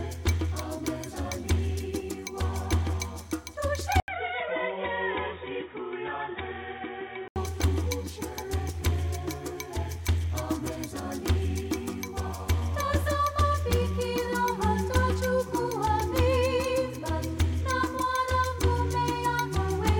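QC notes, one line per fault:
4.0–7.36 s, input switched to a poorer device: capture likely moved to a lesser microphone or headset path, so after an 80 ms gap the sound loses all content above 3.8 kHz, turns dull and boxy, drops about 10 dB and gains background noise about 40 dB down.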